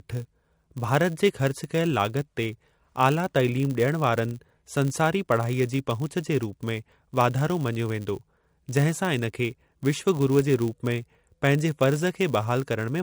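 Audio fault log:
throughout, MP3 compression: likely a low-bitrate MP3 encode, near 48 kbps, starved weak lines, making the speech plainly watery and swirly.
throughout, filter restarted on every block: the filter loses its state at each block, 100 times per second, so every block opens with a tiny transient, heard as a 100 Hz buzz that follows the speech level.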